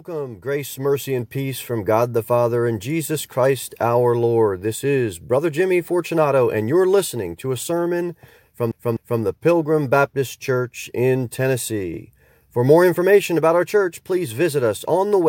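A speech recording whose level swells from 0.05 s to 4.82 s, voice and background climbing together by about 7 dB. That is automatic gain rising: the gain control judged the input too quiet and raised its gain gradually over those seconds. Just after "to a sermon from", from 8.71 s to 9.22 s, a short fragment of about 0.25 s stutters, repeating twice with a brief mute at each jump. That is a CD stuck on one turn, where a scratch knocks the laser back a track at the same point on every rotation.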